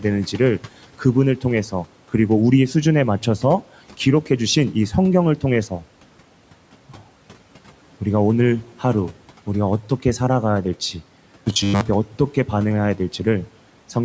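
From 11.25 to 11.81 s, audio likely arrived too seldom, so playback kept repeating a short stretch, which fits a 10 ms buffer, and skipped most of the real speech. This robotic sound from repeated short buffers is a rigid, metallic 100 Hz buzz loosely following the words.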